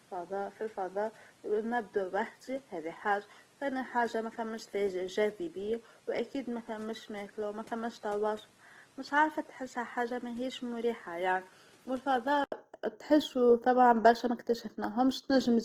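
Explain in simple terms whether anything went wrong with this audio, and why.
Two things went wrong. Throughout the speech there is plainly audible Opus compression, most likely from a low-bitrate encoder working in its music mode. It keeps the full frequency range but runs short of detail, so the voice comes across rough, grainy and noisy rather than clean.

From the start until 12.52 s, the recording sounds like the input switched to a poorer device, likely a different or lower-quality microphone. That stretch is noticeably quieter and duller, with nothing above 13 kHz, and carries a faint background noise of its own. At 12.52 s a brief gap of about 80 ms is followed by clearer, fuller sound.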